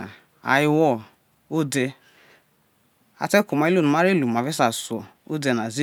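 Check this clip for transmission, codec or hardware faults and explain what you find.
No fault can be heard anywhere in the clip. Listening through the speech, nothing stands out that needs to be flagged.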